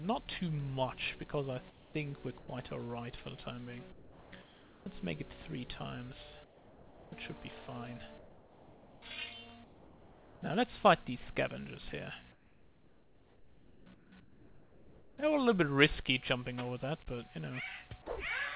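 Comfort noise in place of the background first appears from 1.70 to 1.94 s. The live background, sitting about 24 dB below the loud passages, gives way to a smooth, featureless hiss about 4 dB quieter. This is likely discontinuous transmission: the sender went quiet and the receiver synthesised noise from a spectral sketch.

Sound dropped by the voice detector follows at 2.38 to 2.48 s. About 60 ms of real sound vanishes into that same steady noise, likely because the sender's detector treated a faint passage as background, stopped sending, and resumed only when it retriggered.

The comfort-noise pattern returns at 3.92 to 4.86 s, and again at 6.44 to 7.12 s, 8.18 to 9.02 s and 9.64 to 10.42 s, where it sits about 4 to 5 dB below the real background. The longest stretch runs from 12.32 to 15.18 s. Throughout, the band stops at 4 kHz with a grainy coding floor, which points to a 64 kbps G.711 A-law call path.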